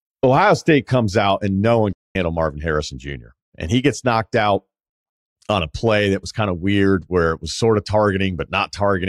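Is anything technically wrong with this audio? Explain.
Yes. There is a playback stall in this speech clip. At 1.93 s the audio cuts to silence in mid-flow. It stays silent for about 220 ms, until 2.15 s, and then carries on. The likely cause is the player running out of buffered data, or its playback thread being blocked for a moment. With nothing to send to the output, it produces silence until data arrives again. The result is a sudden, unnatural gap in the speech.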